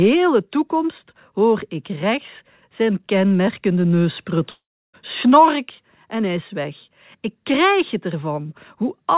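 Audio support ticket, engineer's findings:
Buzzy continuation of the last sound from 4.5 s, fading out, then about 0.32 s of silence; sound resumes at 4.95 s with roughly 0.44 s lost. Likely long network dropout: receiver concealment stretched, then muted. Band ends at 4 kHz, fitting G.711 mu-law.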